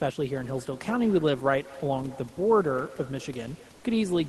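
From 3.75 to 3.83 s the sender likely paused transmission, so comfort noise in place of the background fills 80 ms with steady, featureless hiss.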